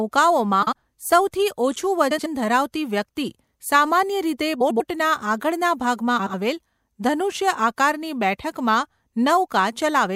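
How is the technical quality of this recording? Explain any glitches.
The speech is marred by four brief frames out of order glitches. At 0.62 to 0.73, 2.11 to 2.26, 4.60 to 4.81 and 6.19 to 6.34 s, two adjacent blocks of 48, 72, 96 and 72 ms play swapped. Each sounds like a garbled flutter. No time is lost.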